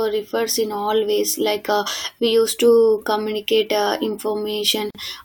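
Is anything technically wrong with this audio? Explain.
Yes. There is a gap at a join of encoded pieces from 4.90 to 4.95 s. Two separately encoded segments were joined untrimmed, so encoder delay and last-frame padding remain. The speech breaks for a gap of about 44 ms, its edges smeared so the silent part is shorter, then resumes where it left off.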